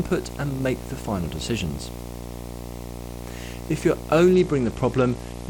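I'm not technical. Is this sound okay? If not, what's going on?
No, there are two problems. The first is a video or display buzz that runs the whole way through. It's a low, steady hum at 60 Hz with a fizzy hash on top, and it sits fairly loud, not far below the speech. A screen or video cable near the recording gear was leaking its electrical noise into the audio. The 60 Hz pitch matches the refresh rate of the picture.

The second kicks in at about 4.33 s and lasts until the clip ends at about 5.49 s. It's a Bluetooth SBC bit pool drop. The speech suddenly goes dull and muffled, with a gritty, sandy texture on top. The Bluetooth link got crowded, so the phone cut way back on the detail it was sending to keep the sound going. The crisp top end is the first thing it drops, and what's left gets coarser and grainier.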